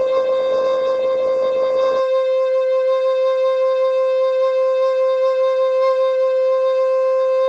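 From the start to 2.0 s the music shows an adaptive stream starting at a low bitrate: the player began on a lean version of the stream to get going quickly, then switched up once it had gauged the connection. The opening sounds dull, with nothing above 8.3 kHz, and the codec artefacts are stronger, which points to Opus at around 16 kbit/s. At 2.0 s the treble returns abruptly, with no gap, consistent with a step to about 64 kbit/s.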